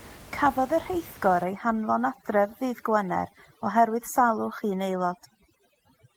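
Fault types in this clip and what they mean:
Overdone noise removal: over-strong noise reduction cuts bands near the noise floor; from 1.44 s the background twinkles.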